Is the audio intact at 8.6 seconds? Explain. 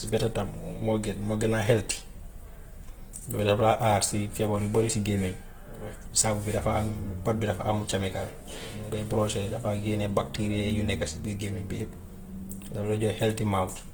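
No. At 8.6 seconds, as through the whole recording, the speech carries plainly audible Opus compression damage, likely from a low-rate encode in its CELT music mode, with a texture that points to something near 16 kbps. Band energies are kept and starved bands are filled with folded or noise content, so tones sound grainy and rough rather than swirly. That sets it apart from MP3 artefacts, which leave spectral holes. Bandwidth stays full, reaching about 20 kHz.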